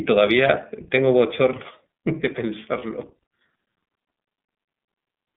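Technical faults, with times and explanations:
Throughout, iLBC codec: The speech was squeezed through the iLBC narrowband VoIP codec, which fits its 13.33 kbps mode with 30 ms frames. Each frame's excitation is coded independently, and the line passes only about 150 Hz to 3.6 kHz. The result is thin, band-limited speech with no air or sibilant detail above the cut-off, and a plainly audible rough, slightly synthetic grain laid over every syllable.
2.78 to 2.83 s, lost iLBC frames: A packet went missing, and the gap fits a single 30 ms frame. With nothing to decode, the iLBC decoder filled the hole by repeating the last pitch cycle blended with noise. For that instant the speech turns into a brief held, faintly buzzy vowel rather than dropping to silence. Because each iLBC frame stands on its own, the decoder picks up cleanly with the next packet and the speech is back almost immediately.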